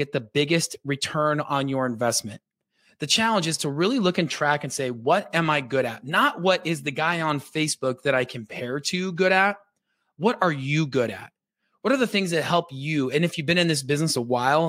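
Speech recording, no technical faults detected.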